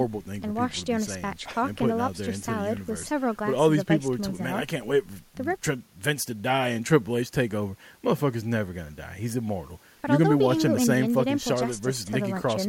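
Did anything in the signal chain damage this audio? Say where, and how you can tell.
No, nothing along the chain seems to have harmed this recording; it's just speech coming through the way it was captured.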